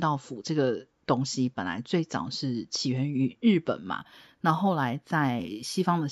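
From 3.99 s to 6.08 s there is imaging from linear upsampling, which points to a 16 kHz source raised to 48 kHz by straight-line interpolation. The top of the band just below 8 kHz is dulled, and a mirrored copy between 8 kHz and 16 kHz, about 30 dB down, adds a faint metallic shimmer to sibilants.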